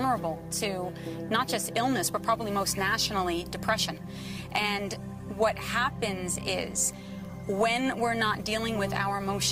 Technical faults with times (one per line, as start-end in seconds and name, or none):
none